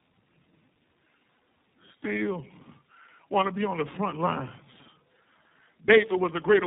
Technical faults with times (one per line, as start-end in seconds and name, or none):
0.00-6.66 tandem speech coding